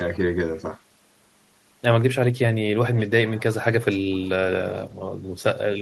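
A speech clip with echo leak, likely from a far-end echo canceller letting loudspeaker pickup through: a copy of the voice returns 381 ms late, roughly 10 dB below the speech at 2.94–3.08 s, then fainter, around 25 dB down, at 3.36–3.55 s.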